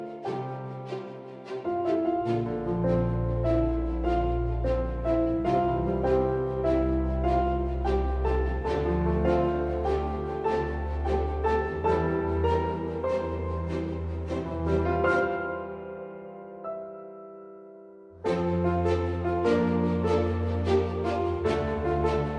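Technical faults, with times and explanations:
No technical faults are present in the audio.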